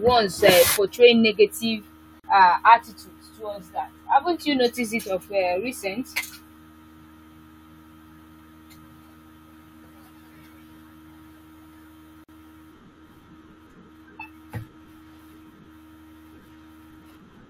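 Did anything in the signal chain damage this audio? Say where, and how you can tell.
Yes. Gap at a join of encoded pieces, at 2.20 to 2.24 s after "uh portraying negative" and at 12.24 to 12.29 s: 42 and 48 ms gaps, ten seconds apart, cut the speech, which then resumes. Codec stage: separately encoded segments were joined with encoder delay and end padding untrimmed.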